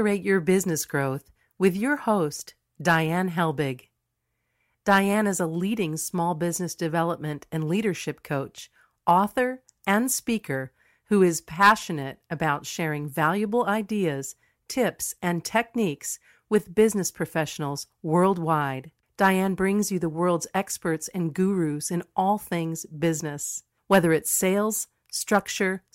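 The speech recording shows no technical faults anywhere in the signal.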